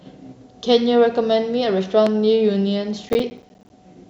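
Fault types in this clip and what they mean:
Loud pop: A single sharp pop sits on top of the speech from 2.07 to 2.09 s. It peaks at about 10 dB above the speech, so it stands out clearly. The speech continues underneath without a break. A sudden electrical step or pulse entering the signal path, likely from a plug, a switch, static or a driver glitch, would produce this. The following circuitry shapes that jolt into a brief click-like thump.
Processor overload crackle: From 3.09 to 3.7 s a burst of gritty crackle rides over the speech. The processor falls behind and misses its deadlines for small audio blocks many times in a row. Each miss drops a short stretch of silence with hard edges into the sound. The spacing fits blocks of roughly 10 ms, with around twenty missed here. These gaps blur into tearing crackle, which stops once the load eases.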